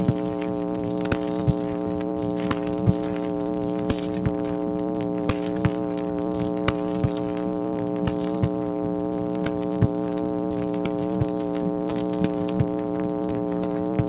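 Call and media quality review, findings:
No faults found; content stops at 4 kHz, as expected for a narrowband call path, which fits G.711 A-law at 64 kbps.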